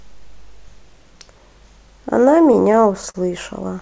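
Speech, carried over a WebRTC call path whose G.722 coding at 64 kbps leaves nothing above 8 kHz, suffers repeated stalls (stutter) from 2.44 to 3.16 s. Packets arrived late, so the jitter buffer ran dry eight times, and each time the receiver stretched the last sound until data resumed. About 101 ms was filled this way, the longest pause 38 ms, roughly 14% of that stretch. Nothing is lost, but the speech drags and hiccups there.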